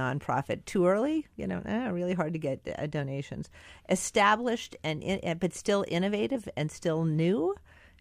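A speech clip with damaged data in a compressed stream, heard briefly at 2.67 s, after "really hard to get", and again from 6.34 to 6.36 s, after "in eh but still". Corrupted frames make the decoder misread and resynchronise.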